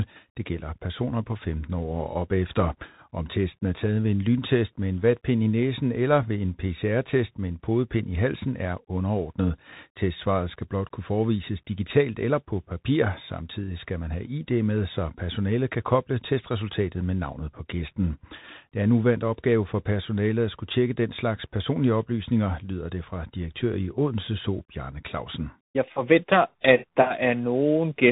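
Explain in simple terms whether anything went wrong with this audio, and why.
The speech went through a Bluetooth CVSD headset codec, coding sound as up-or-down steps. Nothing above 3.8 kHz survives, so it's muffled, scratchy and hissy throughout.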